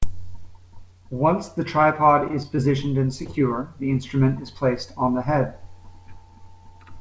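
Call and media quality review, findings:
Repeated packet loss (robotic sound), 2.28–2.59 s, just after "the tripod": choppy stretch with pieces missing. Four holes, each up to 20 ms, about a fifth of the span concealed. The decoder's concealment extends the last sound. Spectrogram shows frozen bands alternating with real frames; waveform shows repeated copies of the last sound.

Short concealed packet loss, 3.25–3.40 s, just before "the instrument is placed": brief smear. About 20 ms never arrived and was bridged by continuing the last sound, stretching timing by a few milliseconds. Spectrogram shows one blurred, flattened frame; waveform shows the continued sound crossfading back.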